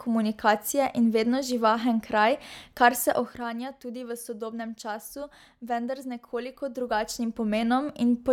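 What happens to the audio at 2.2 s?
Nothing goes wrong at 2.2 s: the speech carries on intact through that moment, with no dropout, click or distortion to be heard.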